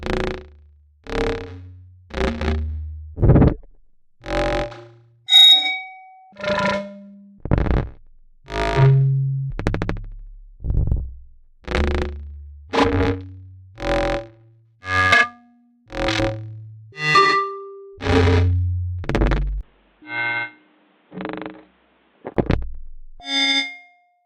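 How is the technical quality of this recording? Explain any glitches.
The recording has one clear glitch. From 19.61 to 22.37 s the sound turns dull and boxy. Nothing above 4.1 kHz remains. It drops about 10 dB and carries a new, faint noise floor. A 20 ms gap marks the switch. This likely comes from the input switching to a poorer device with a narrower band.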